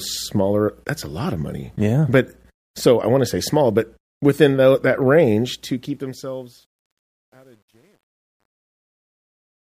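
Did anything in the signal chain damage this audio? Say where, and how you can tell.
Yes. From 5.29 s the speech, fading out over roughly its last four seconds, turns grainy, worst from 6.41 s to the end. This is truncation distortion on a fade: an undithered gain stage kept too few bits, which fits about 10.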